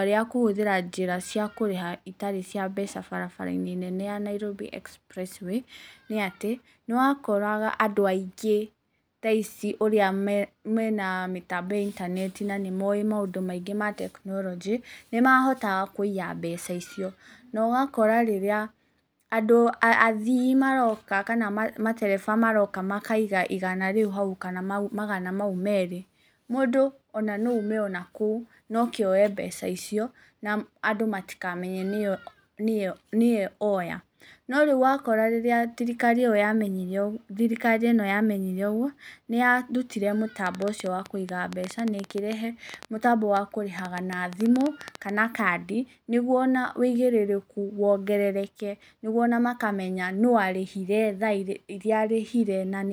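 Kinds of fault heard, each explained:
Train of clicks: From 40.47 to 45.10 s, some forty similar pulses tick over the speech at about 8 per second on an uneven pace, peaking well above it, likely from electrical interference or a faulty connection. They appear as thin vertical broadband lines on a spectrogram and sharp spikes on the waveform.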